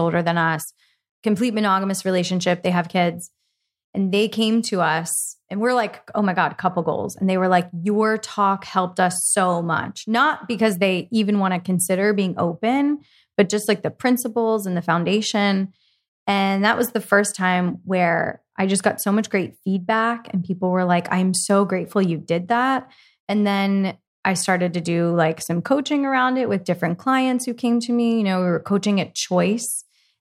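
No technical faults are audible.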